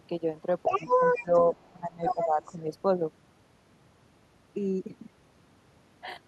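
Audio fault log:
0.66–1.43 s, other side's voice leaking through: The echo canceller likely left the far end's loudspeaker sound in the microphone signal. A second voice runs alongside the talker at about the same loudness for nearly eight tenths of a second.
0.78–0.88 s, speech suppressed in double talk: With both sides active at once, the canceller likely could not separate the talker from the echo and turned everything down. The talker's voice sinks sharply for about a tenth of a second.
1.21–1.34 s, speech suppressed in double talk: The canceller likely clamped down again while the far end was still leaking through. The talker dips noticeably, though less deeply than before, for a little over a tenth of a second.
1.64–1.70 s, other side's voice leaking through: A brief, very faint scrap of the far end gets past the canceller, likely because it was not fully subtracted. It is heard as a short ghost well below the talker.
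1.72–2.42 s, speech suppressed in double talk: The canceller likely treated overlapping talk as echo and held the gain down for about half a second. The talker's voice drops sharply.
2.05–2.27 s, other side's voice leaking through: Inside that suppressed stretch, the far end likely slips past the canceller at nearly the talker's level. The two voices compete for about a fifth of a second.
2.43–2.56 s, other side's voice leaking through: A final short trace of echo likely escapes cancellation. It is very faint, lasting just over a tenth of a second beneath the talker.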